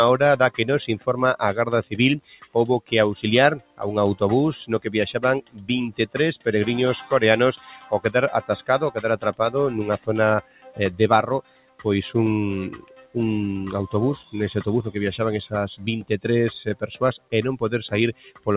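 A noise suppressor built for speech was left running on music or sounds through the whole clip, treating steady tones, ambience and decays as noise to be removed. The result is a level that pumps up and down by something like 15 dB: attacks come through, but anything held sinks, so the sound flutters and thins rather than sustaining. Underneath, the call path's coding leaves nothing above 4 kHz, which fits a G.711 line.

The suppressor cuts individual passages harder than the rest, with sustained and fading material hit worst. From 0.51 to 3.81 s it pulls down about a second of sound in total, by about 17 dB at the deepest. From 4.86 to 6.46 s roughly half a second drops by up to about 16 dB. From 7.57 to 8.99 s the dip is milder, about 10 dB. From 9.98 to 13.16 s around a second and a half sinks by up to about 17 dB. From 16.03 to 18.48 s sound is again pulled down, up to about 17 dB.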